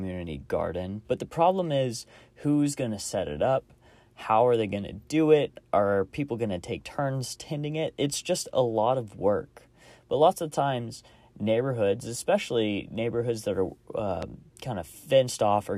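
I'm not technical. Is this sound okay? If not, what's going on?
No. At 14.22 to 14.26 seconds, right after "neighborhoods that are uh", there is one loud pop. It is a sharp click, much louder than the speech, which keeps going underneath. It was likely caused by a sudden electrical jolt, from a plug, switch or static.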